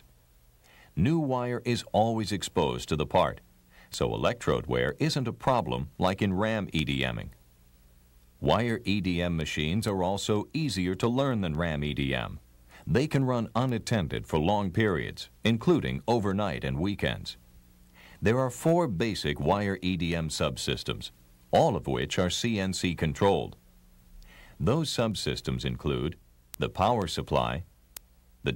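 From 0.14 s to 28.44 s, word clock ticks recur roughly every fifth of a second, about a hundred in all. The receiving device runs unlocked from the sender's clock, drifting by around 100 ppm, so each slip drops or repeats a single sample and leaves a brief click in the audio.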